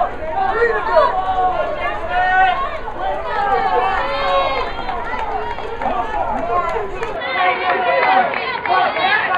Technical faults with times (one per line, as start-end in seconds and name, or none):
7.16-9.38 input switched to a poorer device